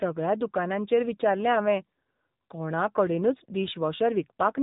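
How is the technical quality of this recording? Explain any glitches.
The recording has been squeezed through a narrowband mobile speech codec, with plainly audible damage throughout.

AMR narrowband mobile codec: From start to finish, the speech carries the buzzy, synthetic edge of AMR-NB. The codec rebuilds each short frame from a vocal-tract filter excited by a few pulses, and at this strength the damage fits one of its lower modes, around 8 kbps. On a spectrogram, all energy stops abruptly near 3.8 kHz, leaving a blank upper band.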